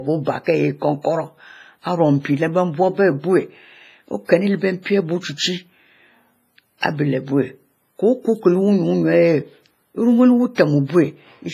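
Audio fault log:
throughout, WMA compression. The speech sounds ringing and washy, with a hiss that swells and fades with the voice. Nothing remains above 15.4 kHz. The heavy smearing likely comes from a Windows Media Audio encoder with long blocks, at a rate that fits about 24 kbps.
10.55 to 10.58 s, pre-echo. A short hiss runs about 30 ms ahead of a sharp attack, which sounds soft and smeared. The codec spread its noise across the whole block, so the quiet moment before the attack was filled.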